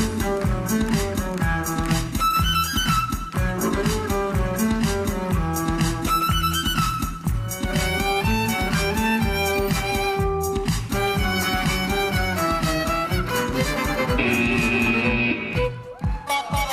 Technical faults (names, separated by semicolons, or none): none